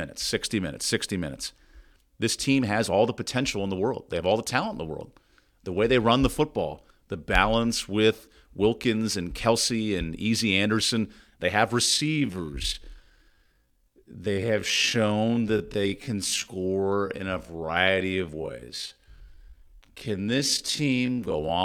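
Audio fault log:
11.84–21.65 s, time-stretched section: software likely lengthened the final part of the recording to fill a set duration, keeping pitch by repeating short slices. The speech abruptly slows to about 0.56 times its pace and drags while its pitch stays the same.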